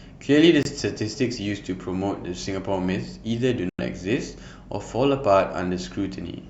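At 0.63 to 0.67 s and again at 3.69 to 3.80 s the speech cuts to silence with abrupt or briefly faded edges, then picks up further along as if it kept playing. That's a Bluetooth dropout, likely late packets discarded, roughly one frame lost first and four the second time.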